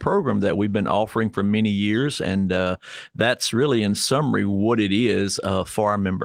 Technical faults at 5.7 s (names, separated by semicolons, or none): none